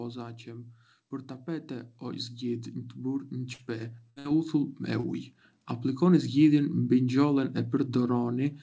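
From 1.46 s to 4.82 s an automatic gain rising fault lifts the level by about 10 dB. The gain control judged the input too quiet and raised it gradually, so the speech and the background noise swell together over those three seconds.

Within that rise, bursts of packet loss occur at 3.53 to 3.62 s and then twice back to back, 4.10 to 4.19 s and 4.19 to 4.28 s. Each time the receiver stretched the last sound for about 60 ms, fading it into a held buzz or hiss, then resumed with about 60 ms of speech skipped.

At 5.00 to 5.06 s a short concealed packet loss leaves a 30 ms hole that the decoder patched by extending the preceding sound before blending back. It comes through as a brief smear or wobble, under the G.722 call band that stops at 8 kHz.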